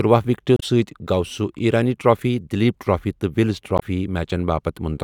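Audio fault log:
0.56–0.63 s: damaged data in a compressed stream. A brief 70 ms glitch cuts across the speech where corrupted bytes in the encoded stream leave the decoder unable to parse the frames. It loses sync until it finds a valid frame header.
3.78–3.83 s: damaged data in a compressed stream. A shorter 50 ms glitch has the same cause. The decoder misreads the corrupted frames and then resynchronises at the next intact header.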